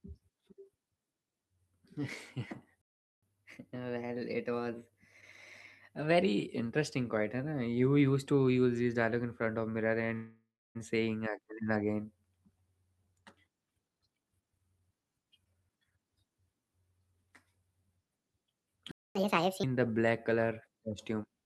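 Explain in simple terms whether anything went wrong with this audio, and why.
Several things went wrong in this speech clip, all to do with timing.

At 2.82 s the sound simply stops for 0.41 s, and again at 18.91 s for 0.24 s. These are playback stalls, likely the player running short of data. The silence is abrupt, with no fading tail.

Right after each stall comes catch-up at higher speed. From 3.23 to 6.23 s the speech runs 1.1 times faster and sounds about a semitone and a half higher. From 19.15 to 19.64 s it runs 1.5 times faster and rises roughly seven semitones. Pitch rising along with speed is the sign of this fault.

From 10.14 to 10.77 s there is a call audio freeze, likely packets arriving late. The last sound is stretched into a fading buzz or hiss, ending in about a quarter second of silence. Nothing is lost; speech continues from where it paused. The fading tail sets it apart from the abrupt stalls.

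From 13.87 to 16.05 s a jitter buffer speed-up makes the speech about 28% faster, cutting out roughly 0.7 s in tiny slices. It sounds hurried, but unlike catch-up the pitch stays normal.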